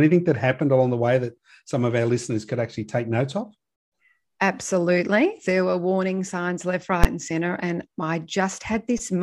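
At 7.04 s the speech is cut by a single violent bang, the mark of invalid numbers at full scale. A calculation in the processing chain returned infinite or undefined values, and these were pinned to the largest positive or negative value for one block about 12 ms long, which fits a 512-sample block. Because the block is so brief, its two full-scale edges merge into one loud bang rather than a separate pop at each end. Unlike an ordinary click or clipped peak, it bears no relation to the level of the surrounding speech and sits flat far beyond its peaks.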